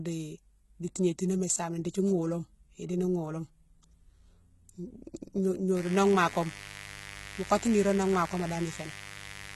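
HE-AAC compression, heard throughout: the treble is bandwidth-limited to nothing above 11.8 kHz and sounds gritty and synthetic, likely from spectral band replication at a very low bitrate, around 16 kbps. Mains buzz, from 5.77 s to the end: a steady, raspy 50 Hz buzz rich in harmonics sits somewhat below the speech, from switching spikes leaking into the signal path.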